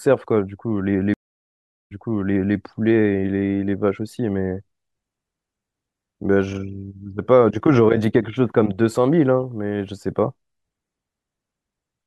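A stream reconnect interrupts this speech clip between 1.14 s and 2.56 s. The connection dropped, the player lost its feed, then reconnected and started a new decoder partway through the stream. The result is a 765 ms gap of silence. When the speech comes back it has jumped 653 ms backwards, because the server resent a burst of earlier audio. That stretch of speech is heard twice, and the first moments after the gap come in muted or faded.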